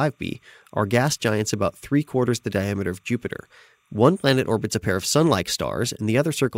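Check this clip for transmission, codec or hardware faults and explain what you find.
One hardware fault is present: timecode bleed. From 0.0 to 4.61 s a faint, steady chirping warble sits behind the speech, about 45 dB down. Linear timecode, a square wave flipping between pitches near 1 and 2 kHz, is leaking from a neighbouring track or cable, with a rhythm that fits 29.97 frames per second.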